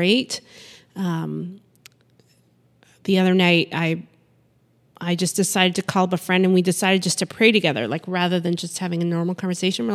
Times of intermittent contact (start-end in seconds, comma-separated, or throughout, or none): none